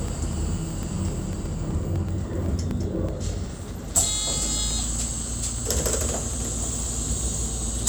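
It's an everyday sound recording with periodic USB or driver dropouts from 0.08 s to 7.84 s: every 0.125 s a couple of milliseconds drop to silence, around seventy gaps in all, because something keeps stalling the bus or audio driver on a fixed schedule.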